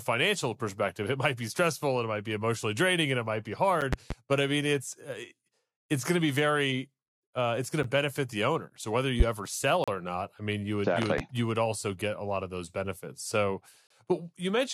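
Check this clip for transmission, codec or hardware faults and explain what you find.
Two kinds of fault are present in the speech: four short silent holes from gaps between stream segments, and three loud pop events.

Gaps between stream segments occur at 3.81 s, 7.83 s, 9.84 to 9.88 s and 13.87 to 13.90 s. Where one segment's timestamps end short of the next one's start, the player pads the difference with silence. The holes last about 8, 10, 36 and 33 ms and fall on a spacing that fits 2-second segments. Each is a hard-edged dropout in the speech, with nothing actually missing from the audio.

Loud pops occur at 3.93 to 4.14 s (two pops), 9.20 to 9.23 s (one pop) and 11.02 to 11.22 s (two pops). Each is a sharp click or thump standing out well above the speech, by about 15 dB for the paired events and about 20 dB for the single one at 9.20 s, while the speech carries on underneath. The likely cause is a sudden voltage step or spike, from a connector, switch, static discharge or driver glitch, entering the signal chain, with the following circuitry shaping it into a brief pulse.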